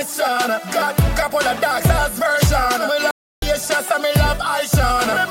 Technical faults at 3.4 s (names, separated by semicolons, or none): playback stall